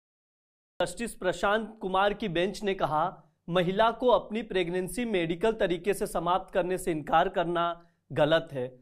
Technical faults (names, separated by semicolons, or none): cut-off start; dropped buffer (overrun)